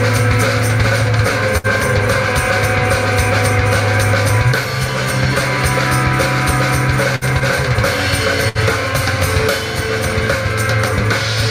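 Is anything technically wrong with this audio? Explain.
Yes: three bursts of packet loss, at 1.57–1.67 s, 7.16–7.24 s and 8.49–8.58 s. Each time about 60 ms of audio is lost. The receiver stretches the last sound, fading it as a held buzz or hiss, then jumps ahead. This shows as frozen, fading spectrogram bands and a tapering waveform ending in an abrupt join.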